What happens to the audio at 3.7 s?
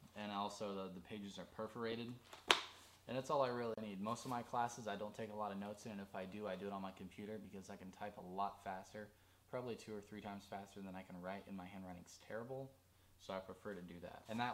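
At 3.74 to 3.78 s a 32 ms gap at a join of encoded pieces opens: two separately encoded segments were butted together with encoder delay and final-frame padding left in, so smeared edges frame the silence and the sound resumes exactly where it stopped, with nothing skipped as a dropout would.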